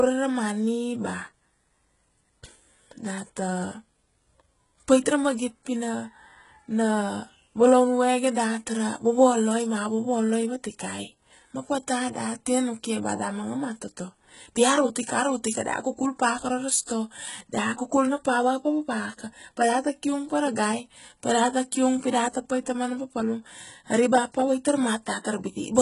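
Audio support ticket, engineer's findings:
Likely HE-AAC compression, whole clip. Spectral band replication rebuilds treble from copied lower bands, so harmonics misalign above the crossover. Speech sibilants gritty, metallic, lispy. Heavy codec damage, consistent with a bitrate near 12 kbps. Nothing above 11.1 kHz throughout.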